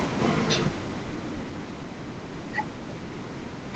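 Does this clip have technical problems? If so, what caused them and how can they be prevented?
Yes. Automatic gain falling runs from 0.05 to 1.92 s: the gain control judged the input too loud, or its background noise too strong, and lowered its gain by about 10 dB. Unlike a compressor acting on individual syllables, the background noise sinks along with the speech. Setting a sensible input level at the microphone prevents this.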